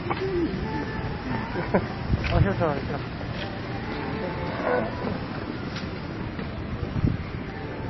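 MP3 compression damage runs through the whole of this clip of everyday sound. Nothing is heard above 5.8 kHz, and the coding damage is plainly audible. The likely cause is low-bitrate MP3 encoding, and the damage points to a rate around 24 kbps. With that few bits, the encoder discards weak frequency components, which come and go between frames and leave a watery, unstable texture, and it cuts the treble off entirely above that 5.8 kHz limit.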